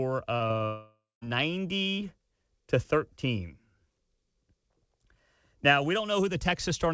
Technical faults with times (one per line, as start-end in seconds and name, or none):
0.36-0.62 short concealed packet loss
0.66-1.23 long network dropout